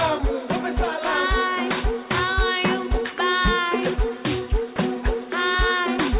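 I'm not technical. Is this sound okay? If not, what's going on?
No. At about 4.76 to 4.78 seconds, a brief slice of sound gives way to a steady hiss before the audio carries on. The likely cause is sound dropped by the voice detector: the sending side judged that moment to be background, stopped sending for about 20 milliseconds, and the receiving side filled the gap with soft artificial noise. About 10 milliseconds of real sound is lost, so you may hear a tiny hiccup. Throughout, the call connection lets nothing above 4 kHz through, giving a telephone-like tone.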